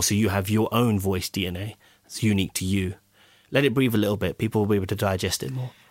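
No technical faults turn up anywhere in this speech recording. There is no moment in it that calls for a timestamp or closer attention.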